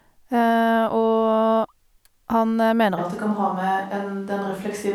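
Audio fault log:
2.99 s to end: switch to a distant microphone. Speech turns abruptly roomy and hollow with thinner bass, level roughly unchanged, room noise about 35 dB down; close microphone likely lost.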